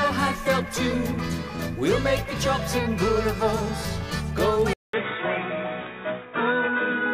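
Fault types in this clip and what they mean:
Input switched to a poorer device, from 4.73 s to the end: after a 200 ms gap at 4.73 s, the sound turns dull and boxy, with nothing above 3.8 kHz, and a new background noise appears roughly 30 dB below the signal while loudness stays about the same. This is likely a mid-recording change of input to a narrower-band microphone or headset profile, whose own bandwidth and noise floor replace the original's.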